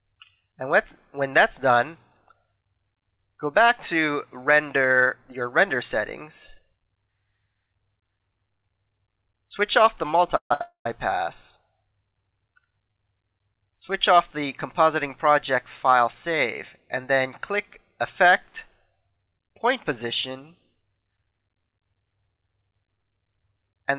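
From 10.36 to 10.51 s the sound halts in a call audio freeze. Packets were likely held up in transit, so the jitter buffer ran dry. The last sound trails off as a fading buzz or hiss, then about 100 ms of silence. Playback resumes where it stopped, 144 ms late, with nothing lost.

At 10.53 to 10.61 s comes a short stall from a late packet. One packet missed its slot. The receiver stretched the last sound for 69 ms, giving a held tone with a slight buzz or dip. Then it carried on.

From 10.61 to 10.86 s a second freeze follows. It fills 240 ms, including about 110 ms of silence, before the sound picks up again.

At 12.91 s another late packet causes a 38 ms stall. A sound is briefly drawn out with a slight buzz or dip.

From 15.55 to 16.53 s there is a jitter buffer speed-up. The buffer held too much audio. Tiny pitch-period slices, about 70 ms in all, were cut out. The sound runs at 105% speed with unchanged pitch and feels hurried.

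From 18.24 to 19.31 s a jitter buffer slow-down does the reverse. Repeated pitch periods add 50 ms. The sound plays at 96% speed, slightly drawn out.

Throughout, nothing sits above 4 kHz, which points to a narrowband telephone codec on the call path.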